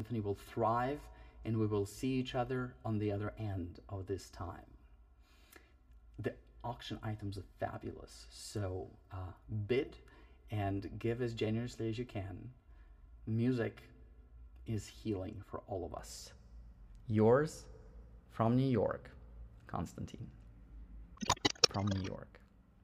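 From 0 to about 16 s the sound is hollow and phasey, a channel delay (comb filtering): one channel arrives roughly 3 ms late and the mono sum cancels at evenly spaced frequencies, starting near 150 Hz. A spectrogram shows fixed horizontal notch stripes across that span.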